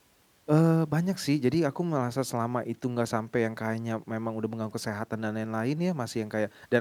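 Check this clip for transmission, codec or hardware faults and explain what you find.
No transmission, codec or hardware faults are audible here.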